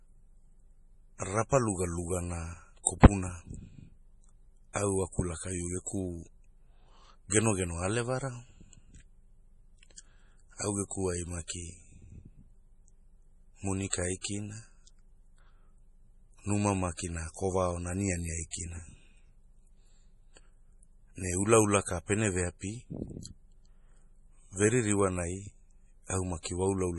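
From start to finish the speech carries heavy MP3 compression damage, likely from an MP3 encoder starved of bits. Nothing remains above 11.4 kHz, and weak frequency lines flicker in and out between frames, giving a watery, swirling texture, metallic chirps on s sounds and smeared consonant attacks. A simple low-pass filter would dull the top end without that shifting swirl, and the depth of damage points to a very low bitrate, around 32 kbps.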